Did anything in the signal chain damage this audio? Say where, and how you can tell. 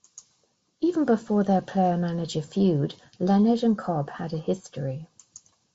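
No, nothing in this speech stood out as damage on listening.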